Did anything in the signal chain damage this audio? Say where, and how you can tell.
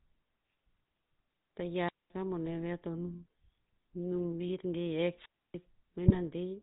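Yes. A GSM full-rate codec runs throughout. The speech is buzzy and gravelly, with nothing above 4 kHz, which fits a 13 kbps GSM stream.

A wireless microphone squelch dropout occurs at the radio link, 1.80 to 2.13 s. Hiss rises, the receiver mutes for about 216 ms, and the speech returns.

GSM bit errors come from the network, at 2.46 to 2.49 s and 6.06 to 6.17 s. Corrupted decoder parameters cause brief squawks and gargling pops.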